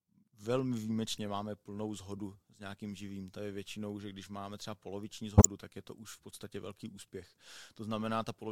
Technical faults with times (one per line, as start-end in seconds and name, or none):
1.16 corrupt frame decoded
2.17 corrupt frame decoded
5.37-5.45 corrupt frame muted